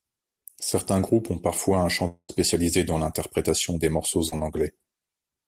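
A French speech clip with two gaps from lost network audio. The first, from 2.07 to 2.31 s, right after "groupes ont parfois un", sounds like a long network dropout and is likely one. About 0.22 s of audio never arrives. The receiver stretches the last sound into a fading buzz or hiss, which thins to roughly 80 ms of near silence before the speech resumes at "dans l'interprétation des morceaux" with the lost portion simply gone. The second, from 4.29 to 4.34 s, just after "dans l'interprétation des morceaux", is short concealed packet loss. Only about 40 ms is missing, and roughly 30 ms of it is filled by continuing the preceding sound before blending back into the real signal, leaving a brief smear rather than a hole. What separates the two is length and outcome: the dropout runs long enough for the concealment to give out and decay into silence, while the short loss stays a tiny blur.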